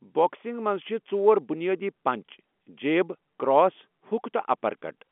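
No technical faults can be heard anywhere in the speech. It comes over G.711 telephone coding working as intended, held to the 200 Hz to 3.4 kHz telephone band with nothing above 3.7 kHz and at most a faint trace of coding noise.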